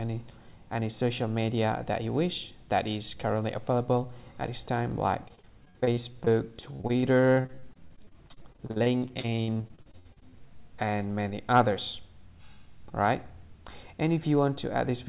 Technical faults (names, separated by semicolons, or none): repeated packet loss (robotic sound)